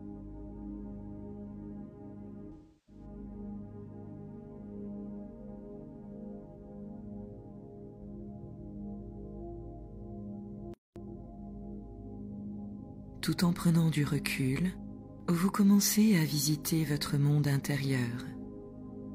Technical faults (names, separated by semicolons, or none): AAC frame loss with concealment; playback stall; time-compressed catch-up